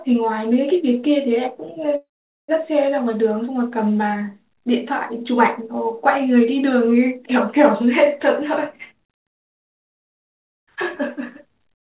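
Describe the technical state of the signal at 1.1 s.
At 1.1 s the speech signal is intact, carrying only the narrowband character of the G.711 mu-law call path, with nothing above 4 kHz.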